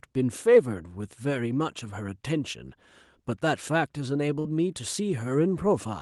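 Speech passes through an Opus-style call path, its spectrum ending near 12 kHz, and a burst of packet loss hits at 4.39 to 4.48 s. About 50 ms of concealment continues and fades the previous sound, showing as smeared, dimming harmonics on a spectrogram. Then roughly 60 ms of speech is simply skipped, leaving a visible jump in the waveform where audio resumes.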